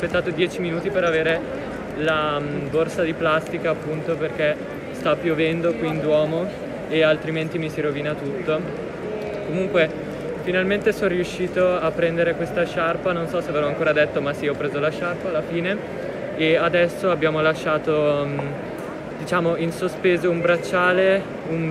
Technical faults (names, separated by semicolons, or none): none